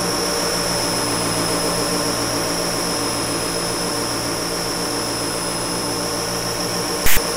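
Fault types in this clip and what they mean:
File tags played as audio: the player reached a block of text metadata near the end of the file and decoded its bytes as if they were samples, so character codes became waveform values clustered away from zero. The result is a loud, harsh rasp pushed off to one side of the waveform, starting and stopping with hard edges, heard as a burst of static from 7.06 s to 7.17 s, roughly a tenth of a second.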